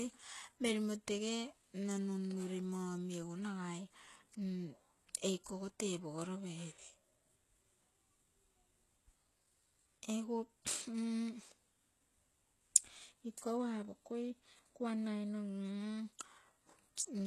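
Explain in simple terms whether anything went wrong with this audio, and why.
The whole recording sounds heavily processed from start to finish. The speech has a thin, fizzy top end, and the s sounds come across as gritty or lispy instead of crisp. Nothing at all is heard above about 12.3 kHz. The likely cause is strong HE-AAC compression. That method keeps the lower part of the sound and fakes the treble by copying lower bands upward. The fake treble sounds bright but doesn't match the real voice, which gives it that metallic edge.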